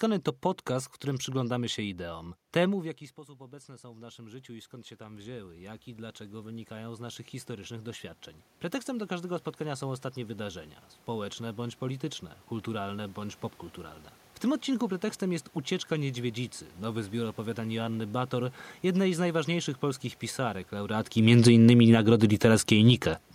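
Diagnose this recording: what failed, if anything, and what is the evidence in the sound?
The failure is in call processing: the automatic gain rising. Just after "w którym przyglądamy się", at about 2.5 s, the talker moves away and the level drops by about 20 dB. From 1.79 s to 13.45 s the speech and the room noise climb back together, slowly. The AGC measured a quiet input and raised its gain by about 19 dB over roughly 12 seconds. Because the boost is applied to the whole signal, the background rises along with the speech.

The automatic gain falling is also a call-processing fault. Around 21.0 s, after "z najważniejszych polskich pisarek", the talker moves. From 21.12 s to 22.89 s the speech and the room background sink together. The AGC read the input as too hot, or its background as too strong for the gain it started with, and pulled its gain down by about 7 dB over nearly two seconds. 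The speech and the room noise fade in step, which points to gain control rather than a change at the microphone.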